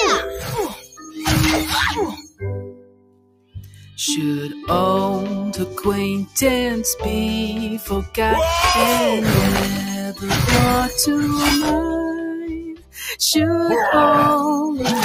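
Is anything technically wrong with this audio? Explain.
Yes. A noise suppressor applied to music or sounds stays active throughout. Built for speech, it treats sustained tones and decays as noise and keeps pulling the level up and down by roughly 10 dB, so the sound pumps. On a waveform, the envelope ripples unevenly under held material.

Sound cut by the noise suppressor occurs at 0.31–0.51 s (about 6 dB down), 0.68–1.18 s (about 16 dB), 2.12–2.44 s (about 20 dB), 2.61–3.98 s (about 21 dB) and 12.37–13.03 s (about 20 dB). The suppressor mistook these stretches for noise, so they sink and thin out. A spectrogram shows faded, hollowed bands there.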